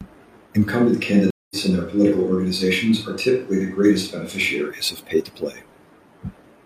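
At 0.68 s the speech suddenly goes roomy and hollow, thinner in the low end, with the room noise sitting well below it and the level barely changing. That's a switch to a distant microphone, likely because the close mic dropped out, and it snaps back at 4.68 s.

Inside that stretch, at 1.30 s, there's a stream reconnect. The connection broke, the player went quiet for 203 ms, then a fresh decoder picked up mid-stream. The audio comes back at 1.56 s about 150 ms further on, so that bit is simply missing.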